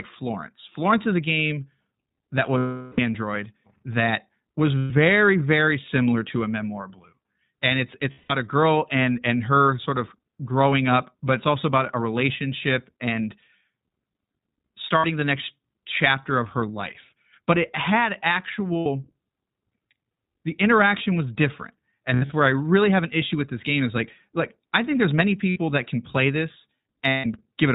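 The whole clip passes through the iLBC codec. The band stops at 4 kHz. Each 20 ms frame is coded on its own. The sound points to about 15 kbps. The speech stays clear but plainly rough and synthetic.

Lost iLBC frames occur at 2.58–3.00 s, 4.78–4.92, 8.12–8.32, 14.98–15.06 (before "the next chapter of"), 18.79–18.87, and 22.14–22.32 (after "the interaction was different", scattered, longest run about 70 ms). They also occur at 25.50–25.58 and 27.08–27.26 (after "that can play this"). The decoder repeats the last pitch cycle with noise. Each gap becomes a held, buzzy vowel, and the longest one, 400 ms, fades. Speech recovers almost at once.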